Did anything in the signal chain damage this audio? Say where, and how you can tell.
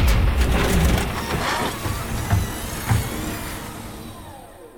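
No, nothing in the signal chain damaged this audio.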